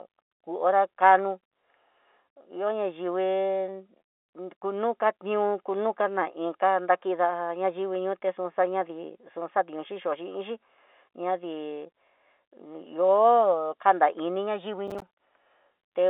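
Near the end of this speech clip, from 14.88 to 15.16 s, the processor falls behind and misses a run of buffer deadlines, giving processor overload crackle. The gaps point to buffers of around 5 ms, with well over a dozen failing in quick succession. Each one drops to silence with hard edges, so the speech is chopped into a gritty, crackling tear for just under a third of a second. It sits on top of the band-limited sound of its G.711 telephone line.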